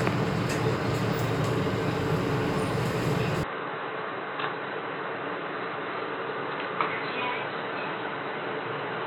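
At 3.43 s the input likely switched to a poorer device. Afterwards nothing passes above 4 kHz, so the sound turns dull and slightly quieter, with no gap.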